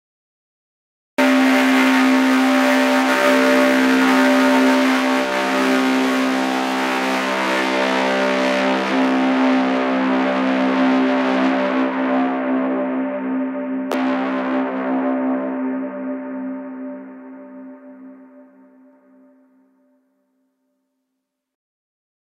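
From 0 to 1.18 s there is only digital silence, and then the audio cuts in abruptly partway through a sound. This is a cut-off start: capture began late, so the sound enters with no natural attack or fade-in.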